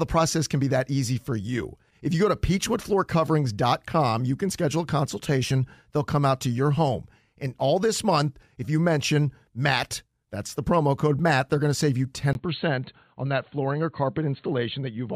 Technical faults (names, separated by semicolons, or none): input switched to a poorer device